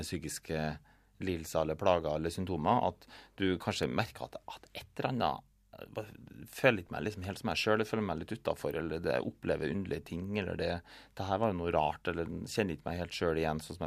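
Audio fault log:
3.83 s and 8.71 s: electrical switching spike, two single sharp snaps over the speech, peaking at about -25 and -30 dBFS, likely a nearby switch arcing into the line.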